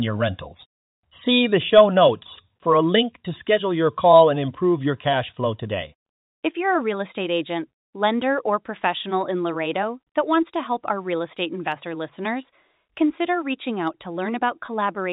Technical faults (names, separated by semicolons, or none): packet loss with pitch repetition